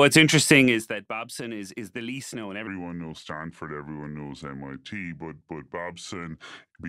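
Zipper noise runs from 0.6 to 0.98 s, where the level falls by roughly 15 dB in 2 dB steps rather than along a smooth curve. With each jump landing about 30 times a second and no ramping between them, every step puts a small discontinuity into the waveform. The result is a fast ticking, zipping texture laid over the speech for as long as the level is moving down.

A section at the wrong speed begins at 2.67 s, right after "is the least known", and continues to 6.89 s. From that point the speech plays at 0.786 times its proper rate, so pitch and tempo drop together. The voice comes out about four semitones deeper and audibly slowed, dragging and heavy. The likely cause is that this stretch was played back or resampled against the wrong clock.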